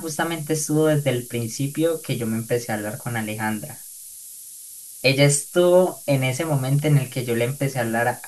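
Throughout the speech, the samples are stored with far too few bits, which fits a 6-bit word, and the rounding error is fed back and shifted upward. This is low bit depth with noise shaping: a steady, thin hiss, climbing sharply toward the highest frequencies and almost as loud as the speech.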